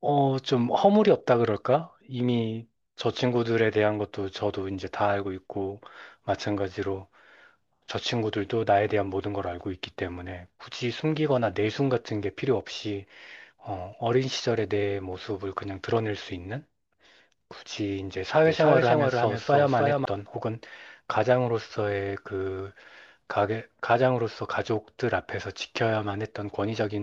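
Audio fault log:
18.45–20.05 s, doubled audio track: the speech repeats about 0.3 s behind at a few dB lower, starting and stopping abruptly, likely a second capture path or misaligned edit.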